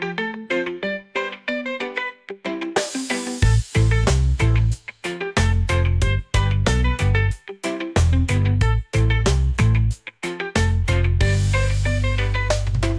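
Nothing technically wrong can be heard anywhere in this audio. No timing, level or signal-path problem turns up at any point in the clip.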